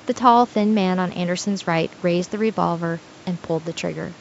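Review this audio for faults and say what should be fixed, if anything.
No faults; nothing to fix.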